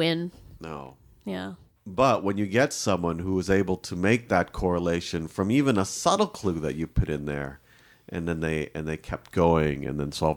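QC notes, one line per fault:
No faults found on this speech clip; nothing to log.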